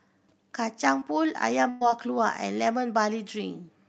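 A speech clip carried over a call link whose Opus coding stops the spectrum at about 8 kHz, with two dropouts. At 0.99 to 1.03 s a short concealed packet loss leaves a brief smear: about 20 ms never arrived and the decoder extended the preceding sound across it. On a spectrogram this shows as a thin vertical stripe where the spectrum runs flat and slightly blurred, with a small kink in the waveform envelope. From 1.69 to 1.83 s a burst of packet loss removes about 120 ms. Concealment stretches the last sound and fades it down, then the speech resumes further on, with the content in between lost. The spectrogram shows frozen, decaying bands with no onsets, and the waveform shows a smooth tapering block with no silence.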